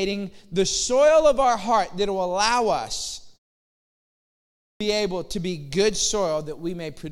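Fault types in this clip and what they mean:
Clipped start after a pause: After a silence of about 1.3 s, the playback device seems slow to wake, so sound resumes abruptly at 4.63 s. Roughly the first 175 ms is lost, and the phrase "able to be good" starts without its opening sounds.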